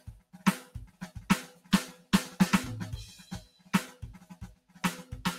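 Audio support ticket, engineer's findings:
Music run through a noise suppressor built for speech, left on for the whole clip. Held tones and tails read as noise, so level swings by around 15 dB. Attacks survive while sustains sink, giving a pumping, thinned-out feel.

Sound cut by the noise suppressor at 0.0–0.42, 0.66–1.02, 1.49–1.72, 1.95–2.12, 3.45–3.73, 3.94–4.37 and 4.55–4.81 s. Dips reach about 11 to 13 dB, each a few hundred ms, as the suppressor clamps down on sustained or decaying material.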